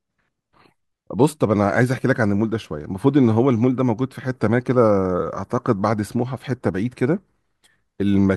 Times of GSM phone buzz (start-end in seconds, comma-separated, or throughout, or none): none